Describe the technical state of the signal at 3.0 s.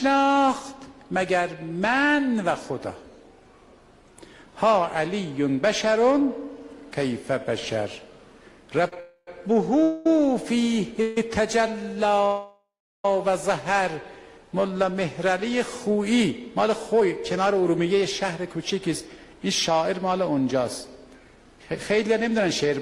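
At 3.0 s the signal is intact, with no audible dropout, distortion, clipping or other fault at that point.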